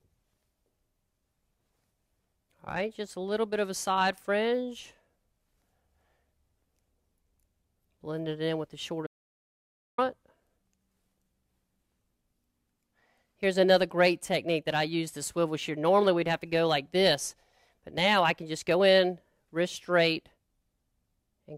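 At 9.07 s the sound drops straight to dead silence and stays there until 9.98 s, a gap of about 0.91 s. That's an audio dropout to silence: no room tone, no hiss, just silence, and the sound resumes mid-flow rather than fading back in. Whatever was happening during that stretch is simply gone. The likely cause is the input briefly disappearing, say a device or link dropping out, while recording carried on.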